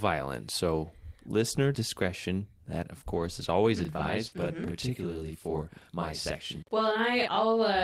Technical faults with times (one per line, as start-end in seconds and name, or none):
3.11-3.21 lost packet rebuilt from error correction
3.85-7.84 channel delay (doubling)
4.27-4.33 short concealed packet loss
4.31-4.45 lost packet rebuilt from error correction